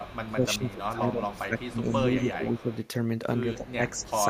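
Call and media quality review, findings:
Echo leak: faint delayed copy of the speech trailing about 191 ms behind, roughly 25 dB down, at 0.0–0.73 s, 1.37–1.78 s, 2.31–2.85 s (louder, about 20 dB down) and 3.65–4.07 s. Likely far-end echo canceller passing residual loudspeaker pickup.

Speech suppressed in double talk: talker's level dips and thins over 0.3–2.69 s, by up to about 10 dB, then again from 3.55 s to the end, by up to about 15 dB. Likely echo canceller attenuating near-end speech while both sides talk.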